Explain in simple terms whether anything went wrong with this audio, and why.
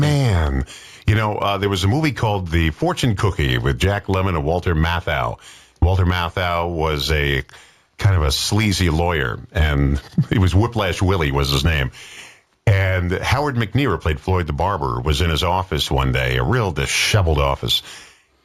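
Something did go wrong, and it runs through the whole clip: imaging from linear upsampling. The audio was converted to a higher sample rate, which fits a jump from 16 kHz to 48 kHz, by simply joining the original samples with straight lines. That's a crude filter, so the top end sounds a bit dull, and faint mirrored copies of the sound leak into the 8 to 16 kHz range, giving bright, hissy moments a slight metallic shimmer.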